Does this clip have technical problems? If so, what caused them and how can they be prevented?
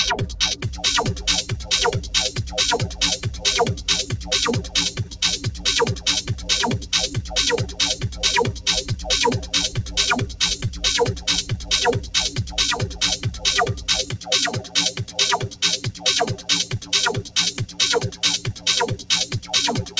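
Yes. A noise suppressor built for speech was left on for this sound. It treats held tones and tails as noise, so the level swings by about 15 dB throughout. Disable speech noise suppression when sending music or general sound.

The noise suppressor also cut specific sounds. It dipped them by up to about 10 dB from 0.55 to 0.83 s, and by up to about 12 dB across 1.43 to 19.97 s, affecting roughly seven seconds in total. Sustained parts sink while attacks survive. Turning suppression off, or using a music mode, prevents this.

There is a skip ahead at 5.04 to 5.06 s. About 0.4 s of audio was dropped, likely by an overfull jitter buffer discarding queued audio, and the two sides are joined with no gap. A larger or more adaptive jitter buffer prevents this.

The call codec path, G.722 with nothing above 8 kHz, band-limits the top end.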